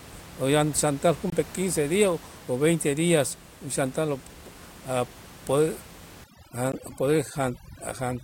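At 1.30 to 1.32 s there's a block of digital silence: about 23 ms of zeros, which fits a 1024-sample buffer the program didn't fill in time. From 6.24 s to the end, overdone noise removal takes over. The room noise, sitting about 21 dB under the speech, collapses into near silence with twinkly specks, and the quieter parts of the voice get gated away with it. Inside that stretch, at 6.72 s, there's another short block of digital silence, about 15 ms, heard as a quick tick.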